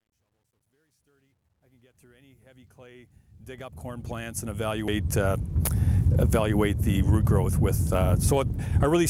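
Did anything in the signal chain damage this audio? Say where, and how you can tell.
Yes. Truncation distortion on a fade: the fade-in from the start to 4.98 s was processed at an 11-bit depth without dither. From 0 to 2.78 s the quiet level turns gritty. The waveform shows staircase steps, and the spectrogram shows broadband hash that tracks the signal.

Damaged data in a compressed stream: at 4.88 s there is a brief blip where the decoder lost frame sync on corrupted bytes. On the waveform it appears as a short discontinuity, and on the spectrogram as a thin vertical smear across all frequencies.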